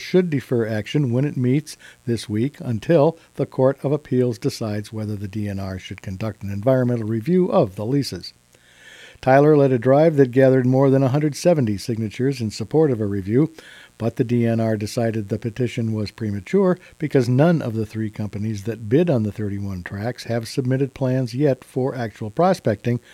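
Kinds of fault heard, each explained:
Mains buzz: Sharp switching spikes from a dimmer, rectifier or poorly shielded lead leak into the signal twice every 60 Hz mains cycle, spraying harmonics into the kilohertz range, so a steady, raspy buzz sits under the whole clip, roughly 40 dB below the sound.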